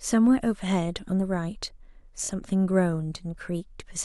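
At 2.23 to 2.28 s the speech stutters. These are repeated frames: a 23.2 ms block, likely a single compressed frame, plays twice more, adding 46.4 ms.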